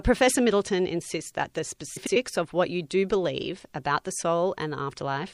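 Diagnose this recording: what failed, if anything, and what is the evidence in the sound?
Across the whole speech recording there is plainly audible codec damage: watery, swirling texture on the sustained sound, metallic chirps on s sounds, smeared attacks, and treble that stops at a fixed ceiling. This is likely MP3 compression, at a rate that fits roughly 64 kbps. The encoder runs short of bits, drops the top band and zeroes weak frequency lines that flicker between frames. Unlike broadband noise or a plain low-pass filter, the damage shifts from moment to moment with the signal.

From 1.96 to 2.16 s, frames out of order at the storage or network stage produce a garbled flutter. Two adjacent blocks of about 96 ms each, which fits four MP3 frames apiece, were decoded in swapped order, so the stretch plays its halves exchanged. This differs from a dropout or a repeat because no time is lost and nothing is duplicated, and the clip stays its full length.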